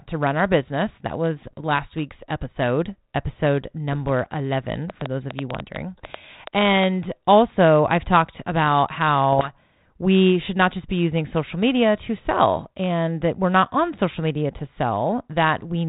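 Bit errors on an ADPCM link appear first from 1.48 to 1.62 s and again from 3.92 to 4.12 s, heard as pops and short rough bursts with brief jumps in level. Each flipped bit corrupts the decoder's step size and prediction, so the damage rings on for milliseconds instead of staying a single-sample glitch. The error rate here is around a few tenths of a percent. The speech sits in a band capped near 4 kHz with light coding grain, consistent with 32 kbit/s G.726 ADPCM.

From 4.9 to 6.8 s a train of clicks rides over the speech and the pauses. There are about fifteen similar ticks at roughly 7 per second with irregular spacing, peaking about 15 dB above the speech. The likely source is interference from nearby equipment or a faltering interface injecting pulses.

A third burst of ADPCM bit errors runs from 9.33 to 9.55 s at a lower rate, roughly a tenth or two of a percent. It gives the same popping roughness and momentary level disturbance as the decoder's adaptation is knocked off track and recovers.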